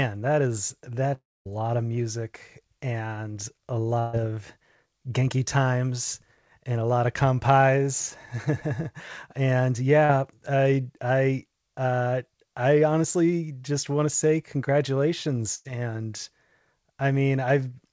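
At 1.14 s, right after "that is that", the sound trails into a fading buzz or hiss and then falls silent for about a quarter of a second until 1.47 s. This is likely a long network dropout: about 320 ms of audio never arrived, so the receiver stretched the last sound briefly and then muted.

From 3.99 to 4.15 s, after "of music and a", a fading continuation of the last sound stands in for about 140 ms of lost audio. This is a burst of packet loss, which the receiver covered by extending the preceding sound.

From 10.05 to 10.11 s, just before "I I uh I", a brief smear marks short concealed packet loss. About 40 ms went missing, and the receiver filled it by continuing the sound before it.

From 15.55 to 15.67 s, another burst of packet loss produces a fading 100 ms stretch where the missing audio was replaced by a continuation of the last sound.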